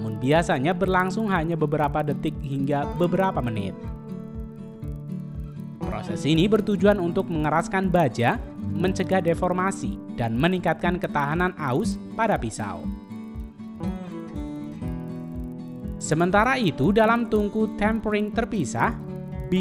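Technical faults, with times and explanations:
Throughout: resampler restarted on every block. There's a steady tick pattern riding on the sound at 25 Hz, one every 40 ms, and it only shows up while there's signal. That points to each 40 ms chunk being upsampled on its own, likely 24 kHz to 48 kHz, with the converter's filter starting fresh each time. At every block edge it's missing the real neighbouring samples, so it leaves a small error that recurs as that regular ticking, almost a low buzz.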